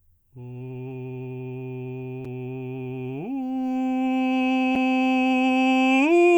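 At 2.25 and 4.75 s the music drops out for about 6.5 ms, a gap between chunks: silence inserted at each 2.5 s join, heard as brief holes.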